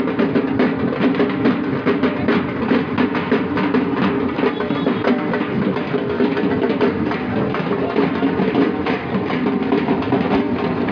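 No technical fault can be heard anywhere in the clip. Nothing breaks up, drops out or shifts in pitch or timing at any point.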